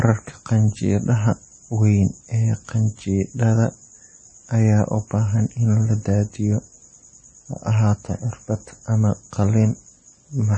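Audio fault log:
Throughout, MP3 compression: nothing reaches above about 8.4 kHz, and the speech carries a plainly audible watery, swirling texture, with chirpy metallic edges on s sounds and softened onsets. This is likely a bit-starved MP3 encode, with damage that fits a low bitrate near 32 kbps. Short of bits, the encoder cuts the treble at a fixed point and drops weaker frequency lines, which flicker on and off frame by frame, and attacks smear.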